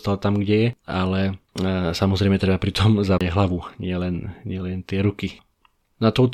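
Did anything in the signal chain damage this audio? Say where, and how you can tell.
Yes. The damage happened at playback, where the CD player suffered a CD skip. A knock or a disc flaw threw the laser onto another turn of the spiral. The player muted briefly while it relocked, then resumed reading from the wrong place. In the speech this is a short gap of roughly 30 ms between 3.18 and 3.21 s. The speech then continues from a different point rather than from where it broke off.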